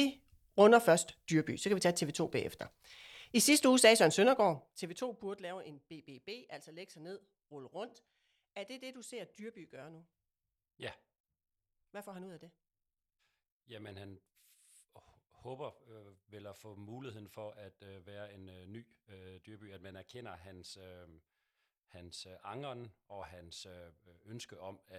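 Speech, with zipper noise from 4.14 to 5.55 s: the level falls by around 20 dB in coarse unsmoothed steps, roughly thirty a second, so a fine ticking rides on the voice. A smooth fade would glide silently instead.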